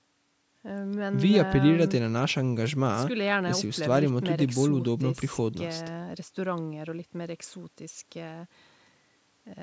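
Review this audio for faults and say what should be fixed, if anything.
Nothing needs fixing: the speech carries the usual call microphone processing, with the lowest bass rolled off and no content above 8 kHz, and that is normal for this path.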